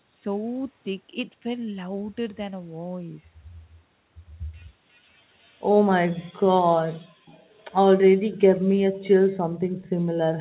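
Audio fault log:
4.93–5.00 s, 7.26–7.45 s and 9.81–9.89 s: echo leak. A faint, delayed copy of the talker trails the speech by 358 ms. It is barely audible in the first scrap, somewhat stronger in the second and clearest in the last, where it sits some 25 dB below the speech. The likely cause is a loudspeaker on one side of the call whose echo canceller let part of its microphone pickup through, sending it back a third of a second late.
7.13–7.26 s, 8.57–8.69 s, 8.89–9.03 s and 9.42–9.78 s: background gated by the echo canceller. The room sound abruptly sinks and then returns. Most dips are brief, and the last lasts about a third of a second. The background falls by about 40 dB in three of them and by about 24 dB at 8.89 s. While the loudspeaker was playing, the echo canceller turned the microphone down hard, then let go, so the ambience vanishes and comes back in steps.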